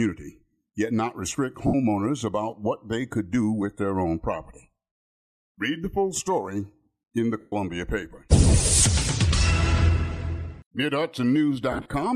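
Lost LE Audio frames at 1.67 s, 7.40 s and 11.72 s leave the LC3 decoder refilling gaps of 67.5 ms, 120 ms and 90 ms with the previous spectrum under random signs. Each gap turns into a brief noisy smear, the last broken into short runs, the longest around 30 ms.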